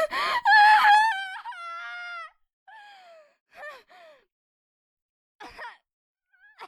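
From 0.93 to 1.30 s, zipper noise rides on the sound as its level drops by roughly 20 dB. The gain moves in 2 dB steps at around 30 per second with no smoothing, and each jump leaves a small click, heard together as a rapid ticking.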